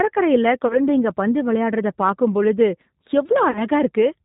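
The whole clip is speech run through the G.729 codec, and the damage is plainly audible. Everything above 4 kHz is gone. The speech is rebuilt from a vocal tract filter, a pitch predictor and a few pulses per 5 ms subframe, so it comes out slightly rough and synthetic. That sound fits the G.729A variant at 8 kbit/s.

At 0.68 s there's VoIP packet loss concealed by the speech codec, lasting until about 0.80 s, just before "பந்து விளையாடறத பார்க்கும் பொழுது". The gap points to a single lost 20 ms packet. The decoder covers it by repeating its last pitch and filter and turning the gain down, so you hear a brief stretched sound that fades. The sound stays weak or distorted after real packets come back, because each frame builds on the one before.

It happens again from 3.51 to 3.66 s. This time the gap sounds like two packets, about 40 ms of missing audio. The concealed sound runs longer and fades further before the sound recovers.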